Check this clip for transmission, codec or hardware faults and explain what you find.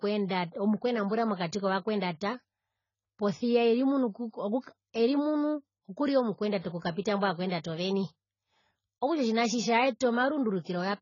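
Two codec faults are present. Throughout, the speech is band-limited with nothing above 7.1 kHz, and it sounds dull and smeared. This points to heavy damage from likely AAC-LC compression at a low bitrate, around 16 kbps. At that rate the encoder lowers its cut-off and quantises the remaining bands coarsely, which blurs detail.

There is pre-echo from 6.80 to 6.82 s. A hiss spreads about 25 ms ahead of a sharp attack. The transform codec spread quantisation noise across the whole block, so the quiet moment before the onset fills with noise and the attack loses its edge.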